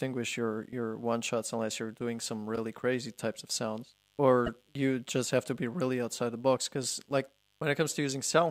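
Mains buzz runs under the whole speech clip, a steady raspy 50 Hz buzz sitting about 40 dB below the signal. Sharp switching spikes twice per mains cycle, from something like a dimmer or rectifier, spread harmonics well up into the kilohertz range.

Repeated frames show up twice. From 2.55 to 2.58 s, right after "unless you're doing some", a 26.1 ms block plays one extra time, a short stutter, which fits a single compressed frame sent twice. The same thing happens from 4.46 to 4.49 s, just before "you just have to", and each repeat adds 26.1 ms to the audio.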